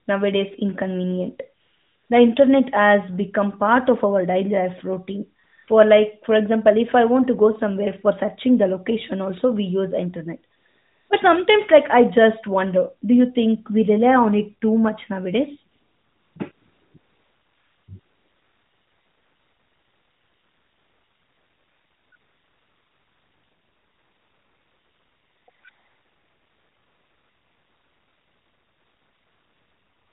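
AMR comfort noise replaces the real background in this speech clip ten times from 1.62 s to the end, first in brief patches, then almost continuously after "it too much nowadays" at 15.72 s. The phone judged the talker silent, stopped sending speech frames, and the receiver synthesised smooth noise instead.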